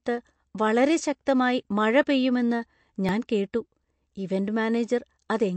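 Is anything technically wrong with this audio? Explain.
Yes. There are two problems: a lossy-codec sound across the whole speech clip, and two brief skips.

Throughout, the audio has a watery, swirling quality. This is likely MP3 compression at a low bitrate, around 48 kbps. With too few bits, the encoder discards the top band entirely and drops weaker frequency components. Those components then flicker in and out from frame to frame, which causes the swirl and metallic edges on s sounds. A simple low-pass filter would also remove the treble, but it would not produce this unstable, bubbling texture.

At 2.03 s and again at 3.09 s, there is a small jump forward in the sound. These are likely dropped buffers from an overrun, where incoming samples were overwritten before being read, so a slice of audio vanished and the surrounding audio was butted together. The first loss is a millisecond or two and the second a few milliseconds. 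Unlike a dropout, there is no silent gap, only an abrupt splice.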